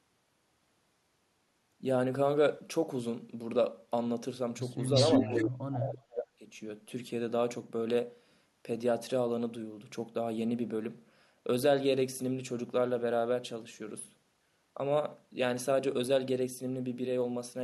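Echo leak appears at 4.94 to 5.44 s and again at 5.73 to 5.90 s in this speech recording: a copy of the voice returns about 345 ms late, first nearly as loud as the speech, then well below it, likely because a far-end echo canceller let loudspeaker pickup through. Speech suppressed in double talk runs from 5.29 to 6.43 s, where the voice drops out deeply for about a second, likely because the canceller, facing both sides at once, turned everything down.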